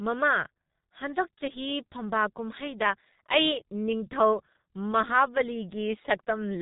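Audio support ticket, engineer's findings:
G.723.1 codec, whole clip: speech cut above 3.8 kHz, muffled and hoarse; consonants smeared by 30 ms frames; heavy damage fits a ~6 kbit/s stream.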